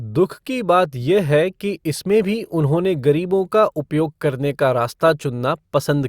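Nothing technically wrong turns up in this short bit of speech, so there's no problem to point to and no time to flag.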